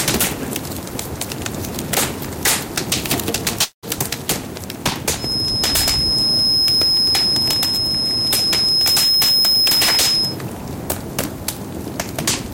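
Hard clipping runs through the whole recording. The sound is overdriven by about 53 dB, so around a tenth of it is sliced flat, producing a constant harsh fuzz rather than the rounder grit of soft saturation. From 3.63 to 3.85 s there is a long network dropout, likely caused by lost packets. A fading buzz gives way to silence, and about 0.2 s never returns. This differs from an edit gap because the sound smears out before it vanishes.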